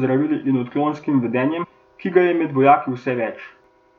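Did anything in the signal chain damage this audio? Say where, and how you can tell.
Yes, compressed frames skipped at 1.63–1.65 s, after "in odklonskim": the codec stage lost around seven 23.2 ms frames, so roughly 150 ms vanishes at the join.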